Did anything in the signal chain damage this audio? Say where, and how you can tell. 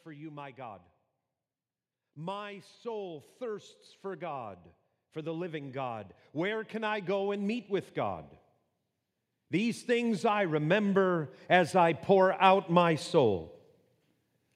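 Yes, in call processing: automatic gain rising at 2.14–4.58 s (about 4 dB), 5.13–8.29 s and 9.49–13.07 s (about 7 dB each). Judging the input too quiet, the gain control ramps up, so speech and background swell together. The waveform envelope and the spectrogram's noise floor climb gradually.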